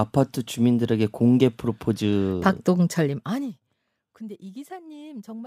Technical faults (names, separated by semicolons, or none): zipper noise